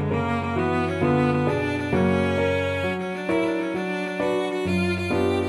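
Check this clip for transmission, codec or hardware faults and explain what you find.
No transmission, codec or hardware faults.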